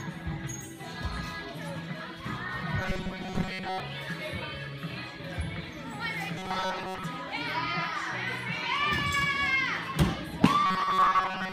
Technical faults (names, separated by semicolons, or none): robotic sound from repeated short buffers